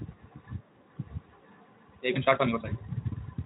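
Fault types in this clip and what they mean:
Time-stretched section: From about 1.71 s to the end, the pace jumps to roughly 1.7 times faster while the pitch stays put, so it sounds rushed. That's likely software squeezing the audio to fit a length by dropping short slices.
VoIP packet loss concealed by the speech codec: Around 2.13 to 2.18 s there's a brief patch where the decoder invented audio from its last frame and faded it. The gap fits a single lost 20 ms frame, and the voice stays weak or distorted briefly afterwards.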